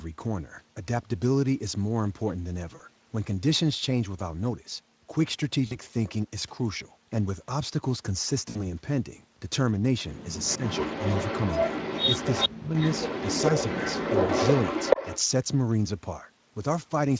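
VoIP packet loss concealed by the speech codec occurs at 2.75–2.81 s, 5.67–5.78 s and 8.49–8.61 s. Around 40, 40 and 60 ms of packets went missing, and the decoder filled each gap by extending its last pitch and filter at falling gain. Each gap sounds like a brief buzzy or noisy smear that fades, with the sound staying weak just after the gap.

An echo leak runs from 10.43 to 12.50 s. A copy of the sound returns about 0.43 s late, a little below the main level. The likely cause is a loudspeaker on one side whose echo canceller let part of its microphone pickup back into the call.

Speech suppressed in double talk appears twice. At 10.57–10.63 s there is a moderate, very short dip. At 12.48–12.76 s the sound is cut to near-silence for roughly 0.3 s. Both likely come from the echo canceller failing to separate the talker from the returning echo and turning everything down.

The echo leak returns from 12.76 to 15.20 s, again 0.43 s late and now about as loud as the sound itself, giving a strong doubled, overlapping effect. 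Inside it, at 14.25–14.31 s, another 40 ms of lost packets produces a brief fading concealment.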